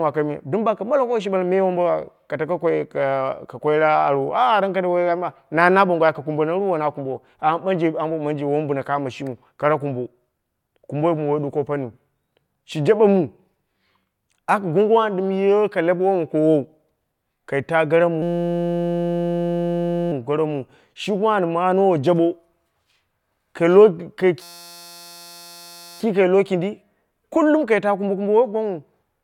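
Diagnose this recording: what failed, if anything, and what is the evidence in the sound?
Driver or buffer stage: a system hang loop. From 18.22 to 20.12 s, after "kai ta gara", and from 24.42 to 26.0 s, before "kai lowo kindi kul", a 5.8 ms fragment repeats as a 172 Hz buzz. That fits a stalled 256-sample ring buffer.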